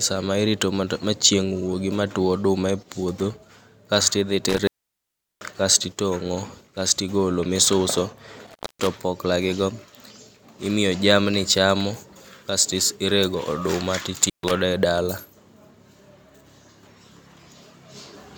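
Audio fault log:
4.49–5.57 s, intermittent contact: the speech drops for about 0.74 s before "kasti tong'o kasti golo" as a loose connection opens. There are crackle spikes at both edges, and a near-flat waveform gap sits between them.
8.47–8.87 s, intermittent contact: after "tong'o kasti golo misuso" the signal opens for about 0.25 s before "opokla gigo". A spectrogram shows broadband click stripes bracketing a faint hiss-only gap.
14.22–14.51 s, intermittent contact: a brief break of about 0.13 s falls between "is rego oduma" and "e dala". The contact crackles open and shut, leaving a short vertical gap edged by transients.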